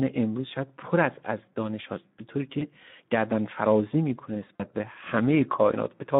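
The whole clip carries Speex codec damage. Speech sounds hoarse and noisy, fitting a setting near 11 kbps. The band runs only from 150 Hz to 3.7 kHz.

VoIP packet loss concealed by the speech codec appears at 2.59 to 2.66 s and 4.56 to 4.65 s. The decoder stretched earlier sound into a fading buzzy tone or coloured noise, consistent with one and two lost frames.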